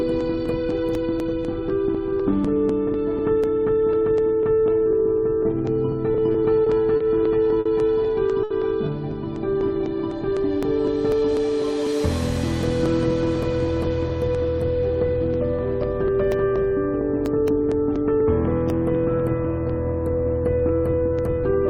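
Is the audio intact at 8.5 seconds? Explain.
No. A short stall from a late packet runs from 8.43 to 8.53 s. A packet arrived late and the jitter buffer ran dry. The receiver held the last sound for about 70 ms, then carried on. Nothing is lost, but the sound hangs, with a slight buzz or dip.

Periodic USB or driver dropouts also affect this moment. They run from 0.21 s to the end, every 0.248 s. Each time, a sliver of audio is skipped as a background task blocks the driver. This gives regular ticks, about four per second.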